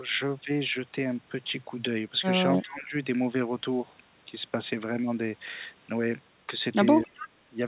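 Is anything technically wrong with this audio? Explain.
Yes. The speech dips twice where both sides seem to be talking at once, and a faint echo of the other side leaks through near the end.

From 2.62 to 2.94 s, and again from 7.04 to 7.27 s, the voice is pushed down. The first dip reaches about 15 dB and the second about 20 dB. Each lasts a few tenths of a second. This looks like speech suppressed in double talk. The likely cause is an echo canceller that could not tell the near talker from loudspeaker echo. It turned everything down, so the voice sinks.

From 7.04 to 7.29 s, a weak delayed copy of sound sits under the speech. It trails by 269 ms and is about 20 dB below the voice. This is an echo leak. The likely cause is a far end playing the call on a loudspeaker while its echo canceller missed part of what its microphone caught. The remainder was sent back and arrives as a faint, late ghost.

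Nothing above 4 kHz is present, which fits a narrowband G.711 call path.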